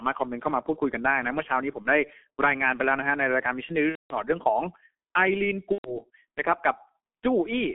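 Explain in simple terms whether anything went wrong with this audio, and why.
Two things went wrong. The whole recording has passed through the G.723.1 codec, an old internet-phone speech coder. It keeps only roughly 200 Hz to 3.4 kHz, so the speech sounds muffled and thin, like a cheap phone line. It also squeezes the voice very hard and models it only in coarse chunks, which leaves a hoarse, grainy edge and smears consonants so they lose their crispness.

On top of that, there's VoIP packet loss concealed by the speech codec in three spots: a brief blip at about 1.82 to 1.89 s, a much longer one from 3.89 to 4.18 s, and another from 5.72 to 5.97 s. Pieces of the stream went missing, about 30, 210 and 120 ms of it, and the decoder filled the gaps by stretching out the last bit of voice it had heard. That leaves a fading smear instead of real speech, and the voice stays weak for a moment after each gap.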